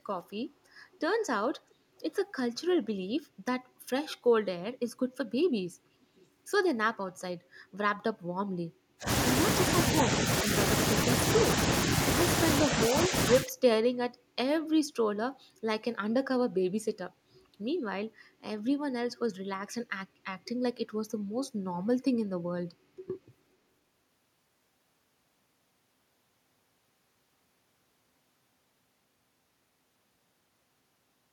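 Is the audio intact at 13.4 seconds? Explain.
No. From 13.31 to 13.52 s the speech dips sharply, by about 15 dB at its deepest, for roughly 150 ms in all. This is likely speech suppressed in double talk: an echo canceller mistook simultaneous talk for echo and attenuated it.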